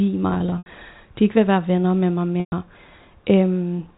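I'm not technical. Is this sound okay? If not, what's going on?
No. There's packet loss with pitch repetition twice. From 0.3 to 0.66 s, just before "de ikke vil være", chunks drop out and the gaps are patched by repeating the last bit of voice, so it sounds briefly buzzy. At 2.4 to 2.52 s, right after "være venner med mig", it fades toward silence. The narrow telephone sound itself is just how the call is carried.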